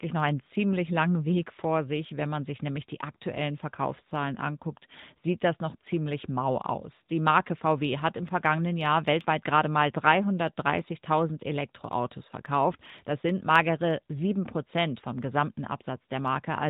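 From the start, the speech passes through the AMR narrowband mobile codec. Its vocal-tract model leaves the voice plainly buzzy and synthetic, which fits a rate of about 10.2 kbps. On a spectrogram, everything above 3.8 kHz is empty, with a flat ceiling.

From 0.11 s to 16.67 s, clock slip clicks form a soft, steady rattle about every 40 ms, hundreds in all. They are likely caused by unsynchronised clocks about 500 ppm apart, dropping or repeating one sample each time. On a waveform they appear as tiny regular steps, and on a spectrogram as faint vertical lines.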